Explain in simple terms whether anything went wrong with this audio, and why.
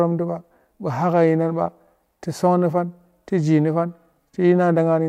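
No, nothing went wrong with this recording.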